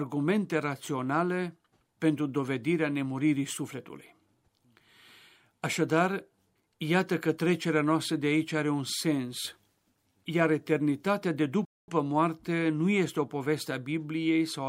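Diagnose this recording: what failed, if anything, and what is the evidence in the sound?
Playback stall at 11.65–11.88 s: speech cuts to silence for 0.23 s, then resumes. The waveform shows a flat gap, the spectrogram a blank column, likely from the player starving.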